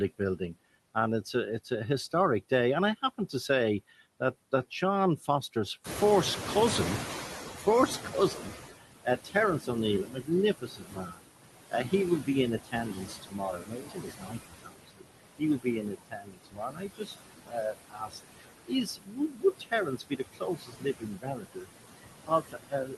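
Noise suppressor artifacts run through the whole clip. The suppressor pulls the steady background down by about 19 dB between phrases and lets it back up under the speech. On a spectrogram the noise floor pumps frame by frame, with fluttering residual specks in the gaps.

From 0.94 to 5.56 s comes the first stretch of speech cut by the noise suppressor. Quiet consonants and word endings are treated as noise and drop by up to about 14 dB, for under half a second in total. The waveform shows their tails clipped short.

At about 6 s the room noise jumps by roughly 16 dB. Then the noise suppressor catches up from 5.84 to 8.72 s. Its noise estimate lags, so the louder noise comes through with less reduction at first and then fades over about 2.9 s until it is cut by about 16 dB. A spectrogram shows a bright band that slowly dims.

From 7.57 to 21.69 s the speech cut worsens. With the noise now only about 7 dB under the speech, the suppressor swallows soft syllables for roughly seven seconds in total, with drops of up to about 22 dB. 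The speech envelope appears as gapped, ragged blocks. Faint passages sound swallowed.

From 22.23 s to the end, speech is cut again, by up to about 21 dB, leaving the final sounds faint. The Opus call path tops out near 12 kHz throughout.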